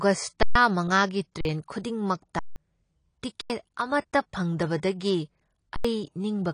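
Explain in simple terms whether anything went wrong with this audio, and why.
Yes. Five times, at 0.43, 1.41, 2.39, 3.41 and 5.76 s, the playback buffer ran dry (an underrun with held sample). The speech freezes flat for 0.04 to 0.17 s, then jumps ahead.

Throughout, the speech sounds dull and smeared, with nothing above 10.2 kHz, likely from heavy AAC compression squeezing the audio to save space.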